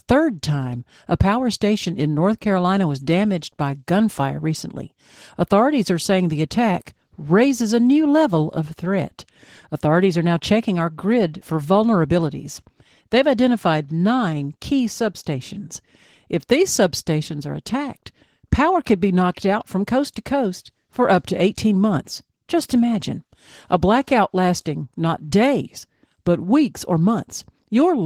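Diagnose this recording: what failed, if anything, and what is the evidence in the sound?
The fault sits at the codec stage: Opus voice compression, with plainly audible damage across the whole speech clip. The signal appears to run in hybrid mode, with SILK linear prediction coding the band below 8 kHz and a CELT layer above it, and the full band remains. The damage comes from coarse coding of the excitation, which fits a bitrate around 16 kbps and 20 ms frames.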